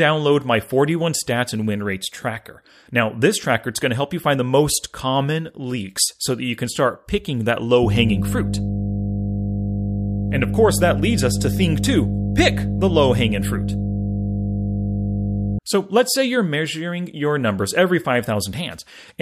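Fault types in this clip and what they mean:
mains hum: From 7.83 s to 15.59 s a steady, low 50 Hz drone with some low harmonics sits under the speech, roughly as loud as the speech itself. Power-line current is leaking into the signal through a ground loop or a nearby transformer.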